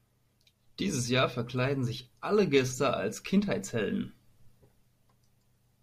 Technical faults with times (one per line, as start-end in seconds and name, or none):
none